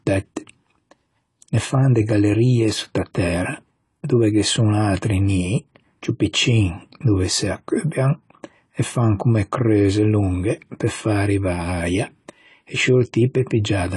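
Throughout, nothing is heard above 11.5 kHz, and sibilants fizz and warble, unlike a clean low-pass. This is likely AAC compression at a low bitrate near 32 kbps.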